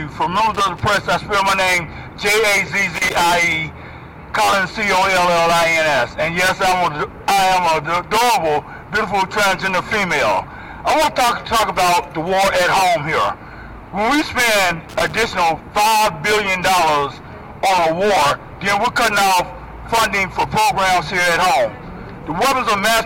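Loose connector crackle occurs at 0.54–0.80 s, 2.95–3.30 s and 14.89–15.26 s: an intermittent contact chops the signal, producing irregular bursts of scratchy crackle.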